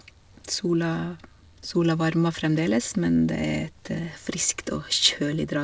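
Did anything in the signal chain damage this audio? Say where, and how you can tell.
No, the speech shows no damage from any stage, and the only trace of the WebRTC call path is the expected band limit with nothing above 8 kHz, which fits a wideband codec such as G.722 at 64 kbps.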